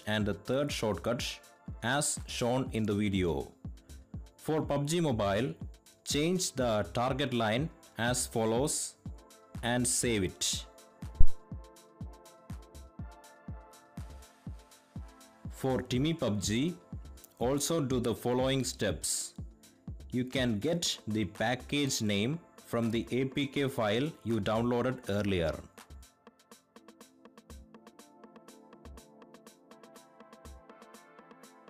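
At 11.21 s a deep thump peaking at about -7 dBFS dies away within roughly 21 ms: a phantom power thump, where switching the supply on a live input sent a voltage step through the coupling capacitors.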